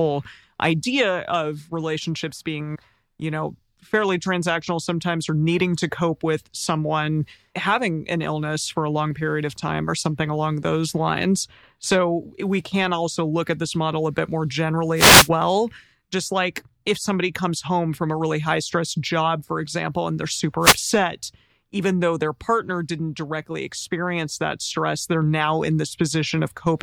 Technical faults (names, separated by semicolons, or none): wireless microphone noise hit